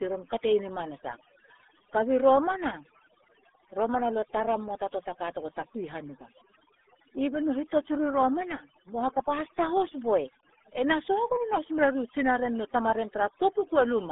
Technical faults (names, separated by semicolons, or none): overdone noise removal; RealAudio 14.4 codec